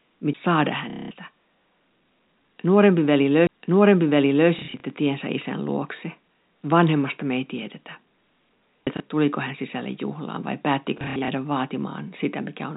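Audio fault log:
0.33, 3.47–3.49 and 8.86 s, CD skip: each is a tick where the laser jumped a track, with a brief mute of roughly 10 to 20 ms before the sound resumes from a shifted point. The last comes just before "tuliko hän sisälle juhlaan". The waveform shows a tiny gap and an abrupt discontinuity; the spectrogram shows a thin vertical click.
0.90–1.11, 4.59–4.83, 8.97–9.00 and 10.98–11.28 s, packet loss with last packet repeated: the receiver replayed the previous packet to fill the gaps. The longest unbroken run is 210 ms at 0.90 s, and the 8.97 s repeat falls just before "tuliko hän sisälle juhlaan". The drop at 4.59 s, just before "tiensä isän luokse", is scattered. Repeats that suit 30 ms packets give a robotic stutter buzzing near 33 Hz. On the waveform, identical segments repeat; the spectrogram shows frozen, evenly spaced vertical striping. The G.711 telephone band, cut off at 4 kHz, runs underneath.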